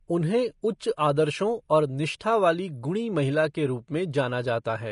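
Across the whole speech recording the top end stops dead at about 10.6 kHz, leaving it dull. That points to low-bitrate audio saved at a high bitrate: likely a heavily compressed Vorbis encoding later re-saved as high-rate MP3, which cannot restore what was lost.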